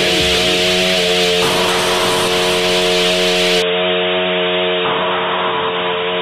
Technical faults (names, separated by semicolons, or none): input switched to a poorer device